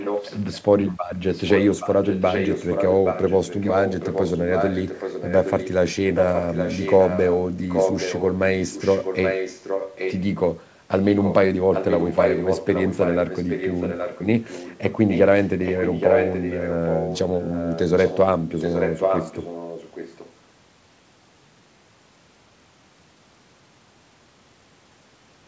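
A delayed copy of the speech trails 0.82 s behind, about 5 dB below it, at 0.00–0.62, 1.08–8.37, 8.70–10.23, 10.92–11.34 (fainter, about 10 dB down) and 11.72–20.33 s. This is likely an echo leak: a loudspeaker's sound that the far side's echo canceller didn't fully remove.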